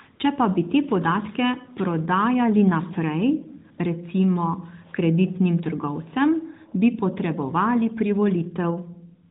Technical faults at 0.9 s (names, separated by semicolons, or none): none